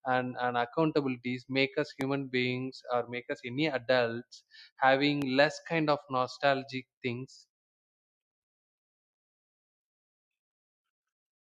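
A loud pop hits at 2.01 to 2.03 s, after "and accountabilities make us", and again at 5.22 to 5.24 s, before "less kind of nostalgic". Each is a single sharp click, roughly 10 dB above the speech, which continues underneath. A likely cause is a voltage spike from a switch or static.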